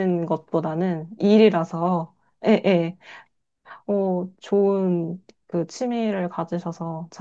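No technical faults are audible.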